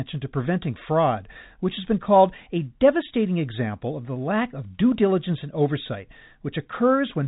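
No technical faults can be heard in this speech recording. It carries the narrow band of G.711 telephone coding, with nothing above about 3.8 kHz, and any coding damage is faint at most.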